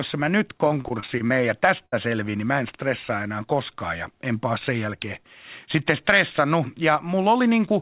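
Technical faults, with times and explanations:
0.68 to 1.32 s, repeated packet loss (robotic sound). Seven separate gaps hit this stretch, none longer than 28 ms. Each hole is patched by carrying the last sound forward, about 140 ms in all, which is roughly a fifth of the span. The next gap comes before the sound settles. That gives a choppy texture with small pieces missing. The call path here carries nothing above 4 kHz, which fits a G.711 link at 64 kbps.
1.78 to 1.82 s, short concealed packet loss. About 20 ms of audio never arrived in time. The receiver bridged the hole by extending what it had just played, for about 17 ms, then blended back into the real signal. The result is a brief smear or wobble. Any very short sound that fell in the gap is lost, replaced by the extended one.
1.86 to 1.94 s, burst of packet loss. This time about 60 ms went missing in one run. The receiver kept the last sound going for about 66 ms and turned it down as the gap went on. 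A voiced sound becomes a held buzz, and anything noisier a fading hiss. The audio then picks up further along, and what lay in between is gone.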